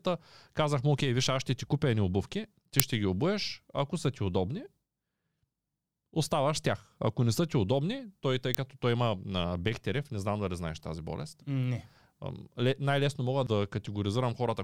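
At 2.80 s and again at 8.55 s, an uninitialised buffer was played before audio was written into it, so stale memory came out as samples. Each is a brief, harsh crack. On the waveform these show as garbage blocks of about 2.9 ms and 0.73 ms, which fits 128-sample and 32-sample buffers, and on the spectrogram as thin broadband stripes.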